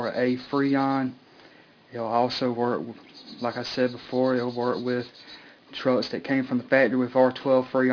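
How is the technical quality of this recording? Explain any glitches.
The recording has one fault, aliasing, running through the whole clip. Content above 5.5 kHz folds back down to unrelated, wrong frequencies, which points to a drop to roughly an 11 kHz sample rate without an anti-alias filter. The folded energy sits around 25 dB below the signal, giving a gritty, metallic edge and a spectrum packed hard up to 5.5 kHz. A clean low-pass would simply sound dull; here new inharmonic tones appear instead.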